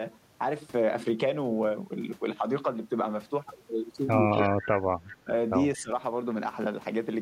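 Speech suppressed in double talk hits this speech recording at 4.34–4.53 s, 5.24–5.30 s and 5.77–5.91 s, where the voice dips by around 15 dB in short bites. Both sides were likely talking at once, and the echo canceller, unable to separate the talker from loudspeaker echo, turned everything down. Echo leak appears at 4.39–4.66 s, 5.05–5.17 s and 5.75–5.82 s as a faint copy of the voice trailing 218 ms behind, roughly 15 to 25 dB below the speech and fading each time. The likely cause is residual loudspeaker sound that the far end's echo canceller did not fully remove and sent back down the line.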